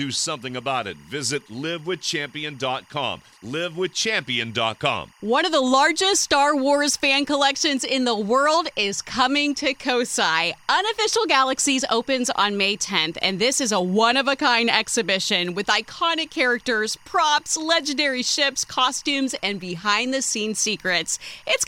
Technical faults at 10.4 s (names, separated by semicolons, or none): timecode bleed